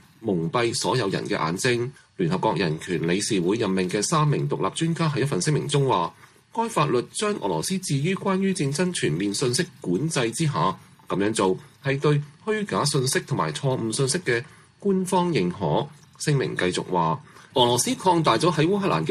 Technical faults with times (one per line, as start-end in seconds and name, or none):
none